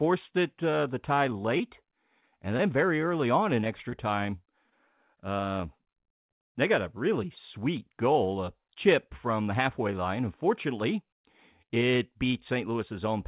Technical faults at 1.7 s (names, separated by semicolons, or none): channel delay (comb filtering); scattered short gaps